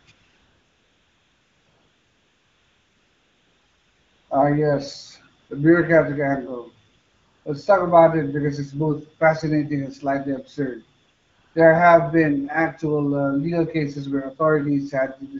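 A smooth, steady hiss replaces the real background in the pauses and switches in and out: from 0.0 to 0.07 s, from 0.11 to 4.29 s, from 5.39 to 5.49 s just before "the bureaucratic angle", from 6.89 to 7.45 s after "yes the bureaucratic angle", and from 11.01 to 11.55 s between "fascinating and slightly absurd" and "have been". This is AMR comfort noise. The phone judged these stretches silent and stopped sending speech frames, so the receiver synthesised filler noise from a rough level-and-spectrum description. The speech itself carries the light coloration of the AMR wideband (HD Voice) codec, consistent with 12.65 kbit/s.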